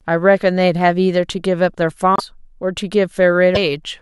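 At 2.16 to 2.20 s and again at 3.54 to 3.57 s, the speech skips forward and briefly turns into a chirp or noise burst, likely a broken MP3 bit reservoir: after missing 26 ms frames, the decoder reads foreign data. A plain dropout would leave silence instead.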